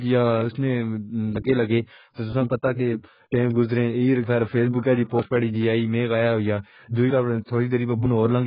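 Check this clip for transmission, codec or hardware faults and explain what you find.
The speech carries codec damage for its whole length, most likely from AAC compression. Nothing is present above about 5.1 kHz, so the sound is dull and muffled. The damage is heavy: the voice is smeared, with a warbling, fizzy texture on sustained sounds and sibilants. AAC-LC quantises each frame's frequency lines against a hearing model. When bits are this scarce, which points to a rate near 12 kbps, the encoder lowers its cut-off and codes the remaining bands coarsely.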